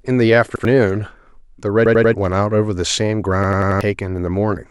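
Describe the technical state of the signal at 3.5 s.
At 3.5 s a repeated buffer fault runs from 3.44 to 3.81 s. One 93 ms slice of speech stutters four extra times, likely from late data, fitting a 4096-sample buffer.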